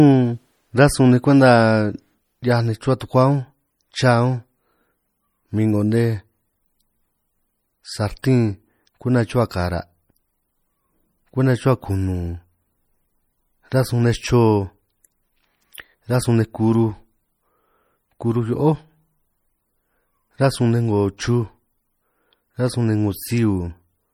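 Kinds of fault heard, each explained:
MP3 compression: The speech carries plainly audible codec damage throughout, likely from MP3 encoding at a low bitrate around 48 kbps. Short on bits, the encoder drops weak frequency lines that flicker between frames, though content still extends to about 21 kHz.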